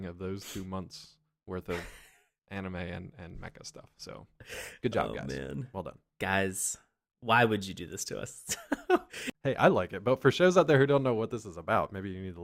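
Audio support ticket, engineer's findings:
Listened to the whole speech recording and nothing's wrong with it, so there's nothing to log against this ticket.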